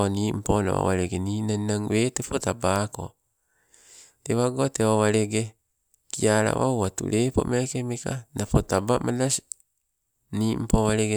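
A nearby switch, motor or static discharge likely arced briefly and coupled into the audio line, leaving an electrical switching spike in this speech recording at 6.85 s. The sound itself is a single sharp snap lasting about a millisecond, sitting on top of the speech rather than replacing it, and it is fairly restrained in level, peaking somewhere around -25 dBFS.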